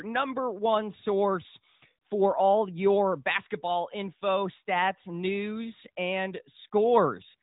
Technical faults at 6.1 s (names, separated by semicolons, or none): none